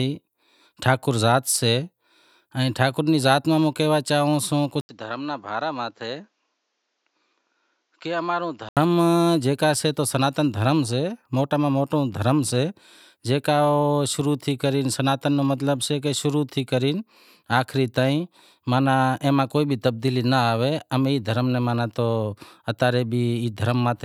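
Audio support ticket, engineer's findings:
Input likely switched to a poorer device, 4.81 to 8.77 s: capture path moves to a second, lower-grade input, then back. An 80 ms gap at the switch. Band capped at 7.6 kHz, so speech turns duller. Level drops around 10 dB. New noise floor sits roughly 45 dB under the signal. Full tone returns at 8.77 s.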